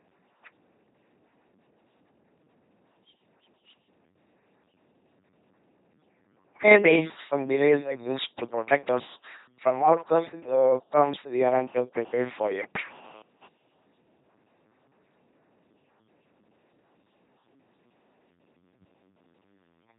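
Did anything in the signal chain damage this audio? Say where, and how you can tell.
Yes. The codec stage is at fault across the whole clip: this speech has gone through an LPC-10 vocoder. The voice is a buzzy, mechanical robot sound with nothing above 3.9 kHz. That fits a 2.4 kbit/s stream in which a ten-pole vocal-tract filter is driven by either a pulse train or noise. Each frame is forced to be fully voiced or fully unvoiced, so the damage is heavy, with stray buzz and hiss wherever that decision goes wrong.

The analogue wiring has a separate fault: GSM phone buzz from 11.69 to 13.47 s, just after "outcomes uh comes we". It is a hard, raspy 217 Hz buzz with a dense harmonic series, sitting about 25 dB below the speech and unrelated to it. A nearby 2G handset's bursts were rectified by the audio circuitry. The buzz is intermittent rather than steady, which points to a data transfer rather than a call.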